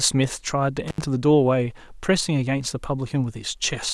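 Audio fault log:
0.88–1.01 s, intermittent contact: the speech cuts out for 75 ms as a loose connection opens, with crackle at both edges, unlike a clean digital dropout.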